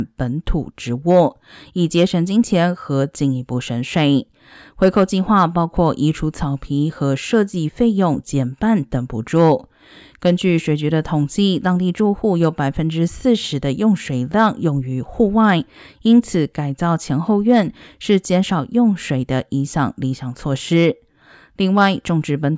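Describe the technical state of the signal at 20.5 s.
At 20.5 s the signal is intact, with no audible dropout, clipping, distortion or other technical fault at that moment.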